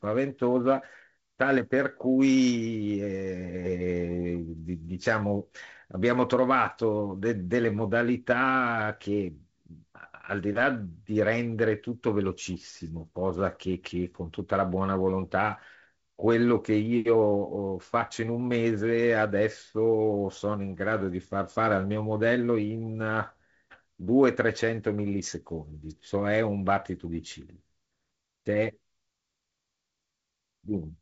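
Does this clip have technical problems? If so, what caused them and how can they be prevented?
No, nothing stood out on listening to this speech, which carries the band-limited sound of G.722 wideband telephone coding, with nothing above about 7.7 kHz.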